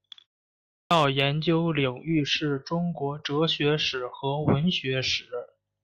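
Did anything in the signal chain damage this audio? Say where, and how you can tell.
Yes, a clipped start after a pause at the playback stage: at 0.5 s, after a 0.31 s silence, the output device wakes late and swallows about 408 ms, until 0.91 s.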